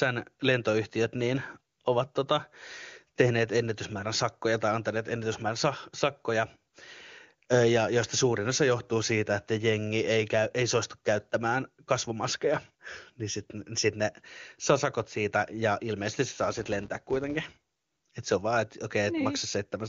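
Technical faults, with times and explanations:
16.38 to 17.99 s, filter restarted on every block: for this stretch of the speech a filter stage discards its stored state at each block boundary and begins processing from zero, so every block opens with a small transient. The transients recur at about 172 Hz, heard as a buzz whose loudness tracks the speech level. That rate fits a 256-sample block size. The clip passes through a wideband AMR-WB (HD Voice) path at a high rate, which adds little or nothing audible of its own.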